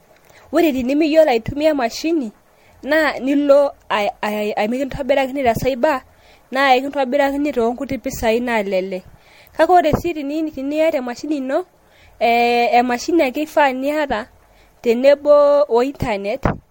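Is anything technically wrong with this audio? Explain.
Yes. Throughout, the speech sounds swirly, hollow and smeared, with blurred attacks and nothing above 16.7 kHz: generation loss, likely from roughly five repeated MP3 encodes, consistent with about 64 kbit/s.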